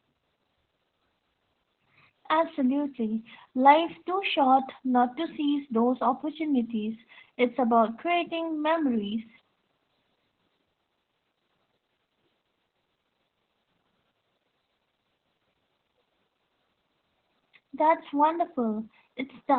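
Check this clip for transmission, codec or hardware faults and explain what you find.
One codec fault runs through the whole clip: Opus voice compression. Nothing is audible above about 4.3 kHz, which points to Opus running SILK in narrowband at a very low rate, around 8 kbps. The narrow band muffles the speech, and coarsely coded excitation leaves it hoarse and slightly robotic.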